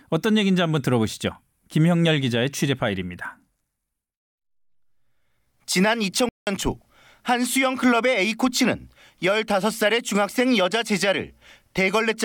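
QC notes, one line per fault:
6.29–6.47 s, playback stall: speech cuts to clean silence for about 181 ms, likely because the player ran short of data.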